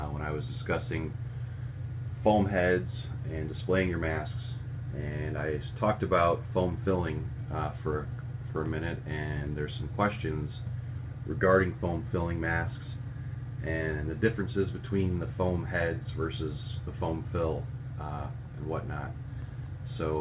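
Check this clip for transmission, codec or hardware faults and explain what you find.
No transmission, codec or hardware faults turn up in this clip.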